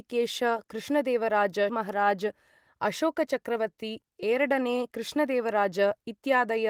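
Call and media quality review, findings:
Skip ahead at 1.69–1.71 s. Roughly 0.7 s of speech is missing, joined with no gap. Queued audio dropped in transit or by jitter buffer overflow, cutting the delay.

Jitter buffer speed-up, 3.49–6.18 s. Speech runs about 110% speed, pitch unchanged, sounding hurried. Buffer over target. Repeated pitch-period removal trimmed roughly 0.3 s.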